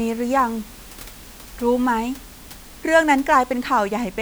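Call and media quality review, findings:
No system faults found in the speech signal; the only background is the room's own noise, sitting about 24 dB below the speech, which belongs to the recording environment rather than to the system.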